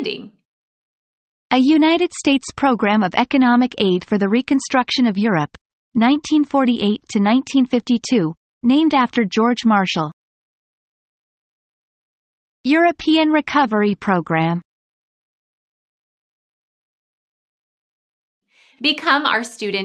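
There are no technical faults to describe in this audio.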